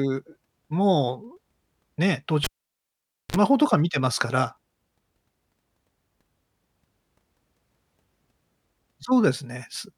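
A live cable was pulled out and plugged back in during this speech recording, so the signal path broke at 2.44 s and reconnected at 3.36 s. In the clip there is a pop as the connection drops, then about 0.87 s of near silence, a burst of 50 Hz mains buzz lasting about 45 ms while only the plug tip made contact, and a second pop as the sound returns.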